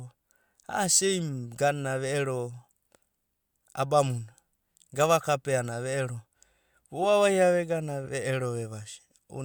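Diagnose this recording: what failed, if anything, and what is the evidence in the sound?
Two brief glitches break into the speech, at 7.03 to 7.06 s and more faintly at 8.04 to 8.07 s. This is a corrupt frame decoded at the codec stage: flipped bits in a few compressed frames were played anyway, misplacing energy across frequencies.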